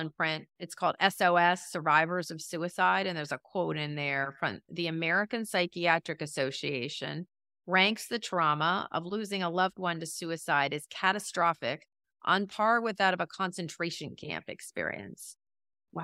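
A short recording of speech, and there's nothing technically wrong to point out anywhere in it.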